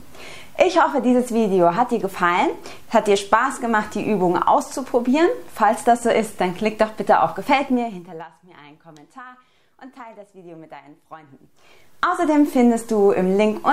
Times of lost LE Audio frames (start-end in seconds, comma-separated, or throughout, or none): none